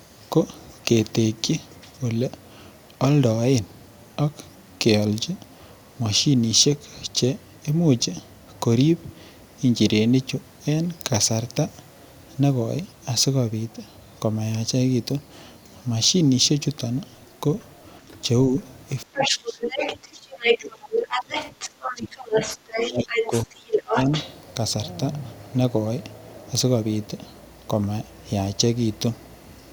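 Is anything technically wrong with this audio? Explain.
Yes, there are echo-cancellation problems in the second half of this speech clip.

Other side's voice leaking through: a faint scrap at 18.09–18.16 s, then longer stretches at 19.16–20.58 s, roughly level with the talker, and 20.91–24.35 s, just under them. The likely cause is loudspeaker playback reaching the mic that the echo canceller didn't fully remove.

Speech suppressed in double talk: a small dip at 18.50–18.54 s, then heavy cuts of around 30 dB at 19.04–21.36 s and about 25 dB at 21.86–24.09 s. Both sides were talking, and the canceller likely turned the talker down with the echo, so their voice drops out in pieces.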